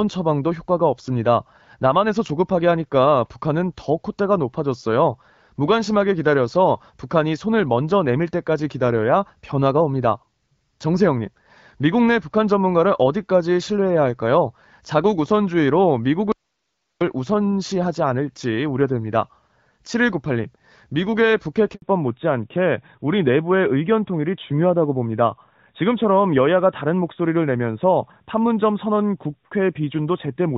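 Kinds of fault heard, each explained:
Audio dropout to a faint residue: the speech cuts out abruptly from 16.32 to 17.01 s, leaving only hiss roughly 55 dB down, likely because the signal was lost while the path stayed live. The waveform goes almost flat, and the spectrogram shows faint, even noise.
Handover gap: at 21.74 s the call switches networks and no speech arrives for 80 ms, so the sound dies quickly and is silent until the new link starts. The waveform shows a short hard gap, and the spectrogram a thin blank vertical strip.
Fallback to narrowband: from 21.82 s onward the call leaves HD Voice for an older narrowband codec, which fits AMR-NB at 12.2 kbit/s. Nothing remains above 4 kHz, and the speech sounds duller and rougher. The spectrogram shows a sharp ceiling at 4 kHz.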